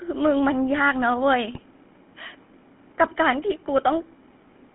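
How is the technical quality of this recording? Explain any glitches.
The recording is limited and degraded: it is speech carried through a GSM full-rate codec for its whole length, with two short bursts of GSM bit errors.

GSM full-rate codec, throughout: The band runs from about 200 Hz to 3.4 kHz, so there is no air or sibilant detail. The coder models the vocal tract and rebuilds the excitation from a thinned pulse train, which fits the 13 kbps full-rate scheme. That simplification gives the voice a plainly audible buzzy, gravelly roughness.

GSM bit errors, 1.54 to 1.60 s and 3.77 to 3.81 s: Corrupted bits reached the decoder and scrambled the filter, pitch and gain parameters for brief stretches, which points to a few damaged frames at each spot. The decoder then synthesised a wrong spectrum and level, so the sound breaks into a short squawk and gargle. The first burst is slightly longer than the second and has a higher error rate.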